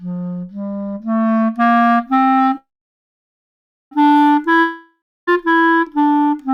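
At 2.57 s a call audio freeze begins, likely from delayed packets: a brief fading buzz, then about 1.26 s of flat waveform, before the sound resumes intact at 3.93 s, now running 1.34 s late.

From 4.61 to 5.29 s a long network dropout likely loses 0.66 s of audio. A fading hiss gives way to a blank spectrogram band for 0.28 s, and the sound returns further on.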